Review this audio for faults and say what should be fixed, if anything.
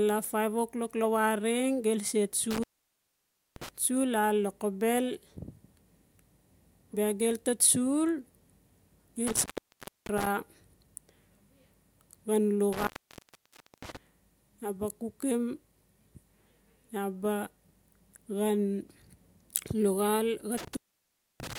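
Intermittent contact at 2.51–3.69 s, 9.27–10.27 s, 12.73–13.97 s and 20.58–21.58 s: a loose cable or plug opens the signal path, dropping the speech for 0.64 to 0.96 s each time, with crackle as the contact breaks and remakes and faint hiss in the gap. Reseat or replace the suspect cable and connectors, add strain relief, and check for a worn jack before recording again.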